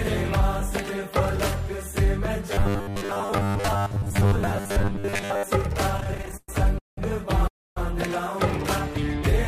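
From 2.52 to 5.43 s the sound turns into robotic sound from repeated short buffers. A rigid, metallic buzz at 100 Hz appears. That pitch comes from the same 10 ms slice being replayed back to back. New audio likely arrived too seldom, so the playback filled in by looping the last fragment. Most of the stretch is repetition rather than fresh sound. The rough contour survives, but the texture is mechanical.

From 5.97 to 6.99 s come repeated stalls (stutter). There are 13 separate hitches in about a second. The longest lasts 190 ms. Packets kept arriving late, so the jitter buffer ran dry again and again. Each time, the last sound was stretched to cover the wait. About 0.42 s of filler was added, roughly two fifths of this span. Nothing is lost. The sound drags and trips forward.

From 7.47 to 7.78 s there is a call audio freeze. The sound halts for 290 ms. A brief tail of the last sound runs on, then fades to silence for about 0.27 s. 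The packets were likely held up in transit, emptying the jitter buffer. When they arrive, playback resumes exactly where it stopped. The clip has simply been pushed 290 ms later, with a gap inserted.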